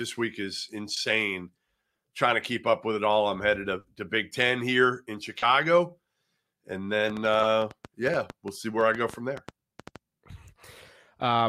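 Right after "week is", at 0.94 s, there's a short concealed packet loss: about 20 ms of the call didn't arrive in time, and the receiver papered over it by stretching the sound that came before, then easing back into the real signal. You hear it as a tiny smear in the flow. The same thing happens after "here in" at 5.38 s, this time about 40 ms.

After "all I'm headed to", from 3.79 to 3.85 s, there's a burst of packet loss. About 50 ms went missing in one go. The receiver kept extending the last sound and let it fade as the gap ran on, giving a brief held buzz or fading hiss before the audio picks up again with that stretch simply gone.

From 7.10 to 9.97 s there's a train of clicks: around twenty similar pulses, roughly seven a second but unevenly spaced, peaking at about 10 dB above the signal. They tick over everything, including the pauses. The likely cause is interference from nearby gear or a faulty connection or power supply. 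Two more short concealed losses land inside that stretch, one of about 20 ms at 7.41 s and one of about 10 ms at 8.72 s, each a quick smear under the ticking.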